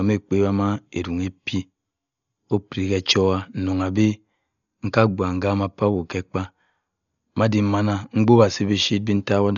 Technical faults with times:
0.00-9.57 Dolby Digital compression

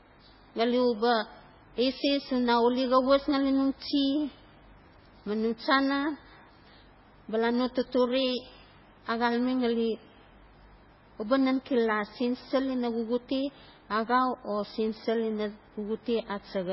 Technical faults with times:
0.00-16.72 MP3 compression

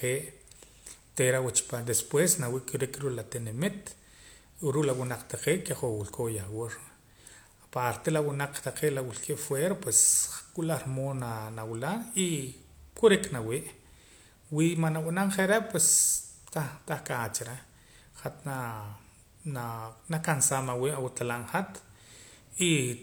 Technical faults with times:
none

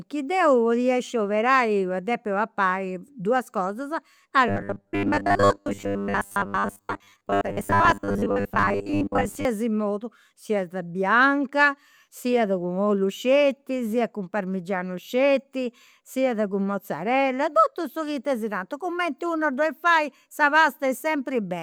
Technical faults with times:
4.48-9.45 robotic sound from repeated short buffers

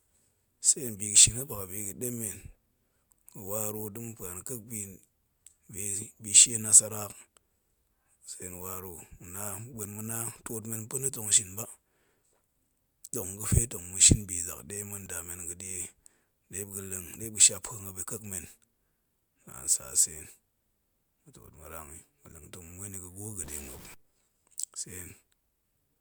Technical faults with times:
15.06 overlap between stream segments
23.44-23.94 stuck bit

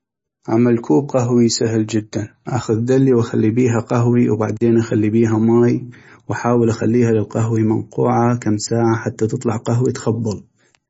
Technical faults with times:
0.00-10.90 MP3 compression

